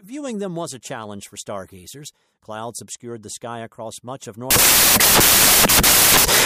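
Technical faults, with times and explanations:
4.51 to 6.45 s, samples built from the wrong bytes: right after "sky across much of", the speech gives way to loud, harsh broadband noise until the end. The sample bytes are being joined wrongly, so the jittery low bits land in the high positions and swamp everything.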